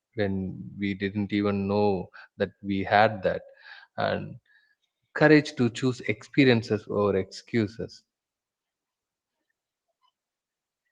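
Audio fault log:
No faults found; the speech passes through Opus voice compression at 24 kbps, hybrid mode, fullband, with no fault events detected.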